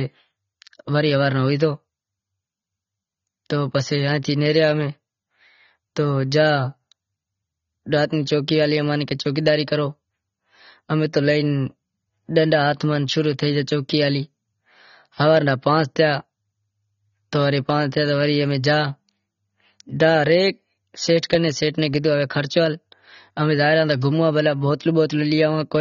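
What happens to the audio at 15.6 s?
Likely AAC compression throughout the clip, its coarse quantisation fitting a low bitrate around 24 kbps, so at 15.6 s the speech sounds dull and smeared, with nothing above 7 kHz.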